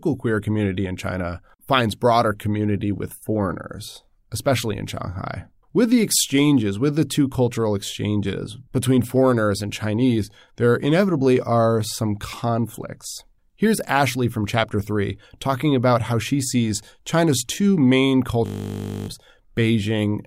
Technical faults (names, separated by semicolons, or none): system hang loop